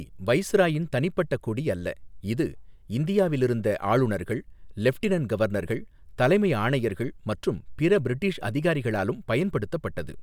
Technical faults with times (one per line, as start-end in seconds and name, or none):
none